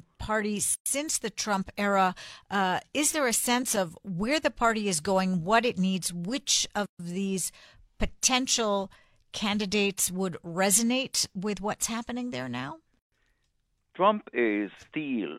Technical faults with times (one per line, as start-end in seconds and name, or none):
0.74-0.86 gap at a join of encoded pieces
6.86-6.99 gap at a join of encoded pieces
12.99-13.12 gap at a join of encoded pieces